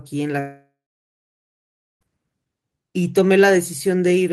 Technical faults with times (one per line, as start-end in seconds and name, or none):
0.39-2.03 long network dropout